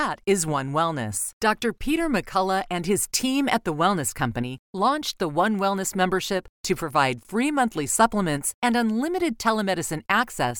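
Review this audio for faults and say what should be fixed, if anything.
Two sharp, broadband ticks, unrelated to the speech, hit at 5.59 s (one sample, about −22 dBFS) and at 8.91 s, right after "free monthly supplements and" (three samples, about −34 dBFS). These are bit error spikes: a flipped bit jolts a sample by a power of two before it snaps back. Use error-checked memory and links, such as ECC RAM and checksummed transfers, to prevent them.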